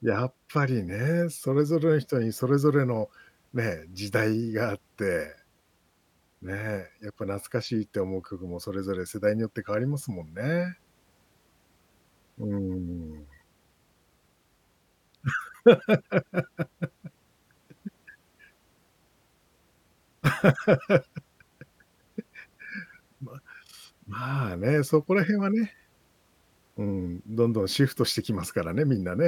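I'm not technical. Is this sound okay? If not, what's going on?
Yes, this recording sounds fine. Listening through the speech, there is nothing wrong to point out.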